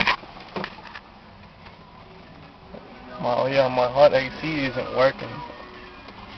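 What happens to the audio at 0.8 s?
At 0.8 s, as throughout, imaging from linear upsampling (22 kHz to 48 kHz) leaves a faint metallic shimmer and a mirrored band about 40 dB down, visible on a spectrogram between 11.03 and 22.05 kHz.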